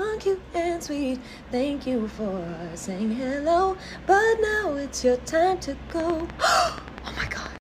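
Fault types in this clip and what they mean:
Train of clicks: a regular run of about twenty near-identical pulses at 10.3 per second from 5.90 to 7.57 s, peaking about 10 dB above the surrounding sound, likely caused by nearby electrical interference or a faulty connection or power supply injecting repeated spikes.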